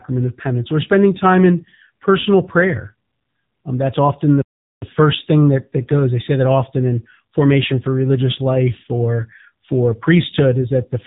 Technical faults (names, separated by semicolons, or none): AMR narrowband mobile codec